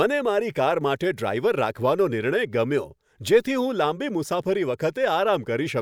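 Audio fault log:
On listening, nothing in this speech recording stood out as a problem.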